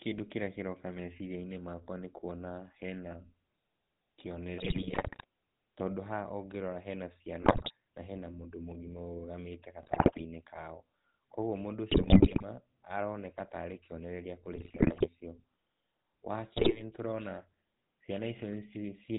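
The whole recording has passed through the GSM full-rate codec, which fits the 13 kbps standard. The codec rebuilds the speech from a vocal-tract filter driven by a sparse, regularly spaced pulse excitation, and it discards everything above 4 kHz. The result is a dull, band-limited sound with a constant buzzy, gravelly roughness laid over the speech. The damage is plainly audible across the full length.

On top of that, GSM bit errors break through in six bursts: 4.58 to 5.24 s, 7.42 to 7.72 s, 9.82 to 10.22 s, 11.90 to 12.44 s, 14.56 to 15.09 s and 16.56 to 16.83 s. Corrupted bits reached the decoder, which points to error rates of several percent, with the last burst the densest. Wrong filter, pitch and gain values warp the spectrum and throw the level around from frame to frame, so the speech turns into squawks, pops and gargling for the span of each burst.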